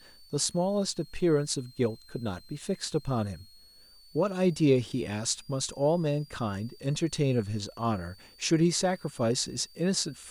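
From start to end, a switching supply whistle sits under the speech. A high tone wanders between about 4.2 and 4.8 kHz, roughly 30 dB below the voice. A power supply's switching frequency has dropped into the audible range and shifts as its load changes.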